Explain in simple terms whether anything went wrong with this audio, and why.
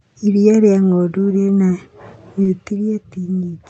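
Two things go wrong. Around 2.43 to 2.47 s there is a short concealed packet loss: a tiny piece of the call arrived too late, and the receiver patched it by stretching the preceding sound, leaving a brief smear rather than silence. From 2.71 s to the end the speech abruptly gets quieter and stays that way, which is most likely one channel dropping out. Unlike the patched gap, this is a lasting level drop, not a momentary blur.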